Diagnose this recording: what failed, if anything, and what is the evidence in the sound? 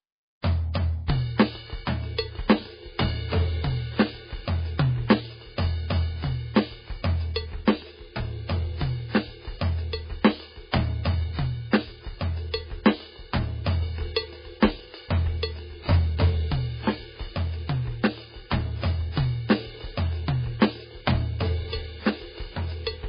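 The failure is at the codec stage. Across the whole music clip there is nothing above 5 kHz, and the remaining sound is heavily watery and swirly, with weak components flickering in and out. This is likely MP3 compression at a very low bitrate, consistent with about 16 kbps.

Pre-echo, also from the codec, is audible from 0.73 to 0.75 s and again at 1.07 s. A short hiss of about 21 ms and then 14 ms precedes each attack because quantisation noise sized for the loud transient spreads across the quiet start of its block, leaving the attack smeared.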